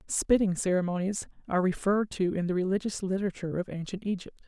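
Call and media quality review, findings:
No faults found in the speech clip. Nothing heard calls for a ticket entry.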